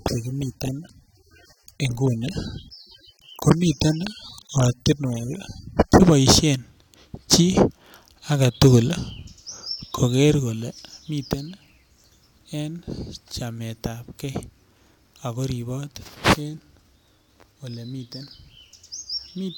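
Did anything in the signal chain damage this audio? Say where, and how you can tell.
Yes, at the playback stage: the adaptive stream started at a low bitrate and held it from 0.0 to 6.0 s, with dull, smeared, artefact-heavy speech that fits AAC near 27 kbit/s. At 6.0 s it steps to a richer encoding, likely around 96 kbit/s, and treble returns abruptly without a gap.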